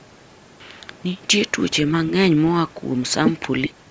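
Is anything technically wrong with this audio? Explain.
Yes, two faults are audible in this speech clip.

From 0.0 to 0.73 s there is an echo leak: a very faint, delayed copy of speech trailing about 0.95 s behind, likely from a loudspeaker echo the far end's canceller failed to remove. On a spectrogram it appears as weak, smeared ghost harmonics well below the main speech energy.

From 3.67 to 3.75 s the speech is briefly suppressed in double talk, likely because an echo canceller mistook it for echo while both sides spoke. Level dips by roughly 20 dB, visible as a short notch in the waveform envelope and a thinned spectrogram column.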